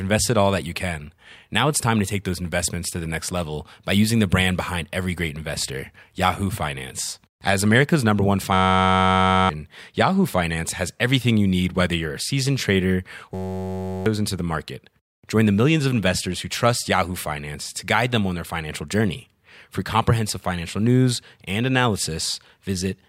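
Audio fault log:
8.53–9.49 s and 13.34–14.06 s, system hang loop: a 10.67 ms slice, which fits a 512-sample buffer, repeats 90 and then 67 times, giving a steady 93.8 Hz buzz. The waveform shows an identical repeating block, and the spectrogram shows harmonic lines at 93.8 Hz spacing. Roughly a second and then about 0.7 s of sound are lost.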